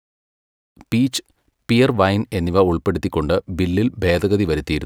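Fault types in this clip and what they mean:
There are no fault types in this clip.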